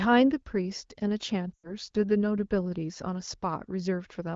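From 1.53 to 1.72 s, lost AMR speech frames occur. The decoder repeats its last good frame with falling gain, so the sound drops to near silence within two frames.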